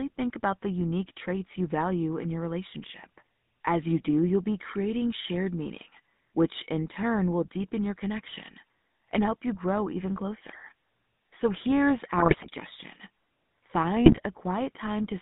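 Buzzy, gravelly speech confined to roughly 150 Hz to 3.7 kHz runs throughout, the sound of the GSM full-rate codec, whose pulse-driven vocal-tract model fits a 13 kbps channel. From 12.18 to 12.48 s and again from 14.06 to 14.20 s the speech breaks into squawks and gargling, the mark of GSM bit errors corrupting the decoder's filter, pitch and gain values.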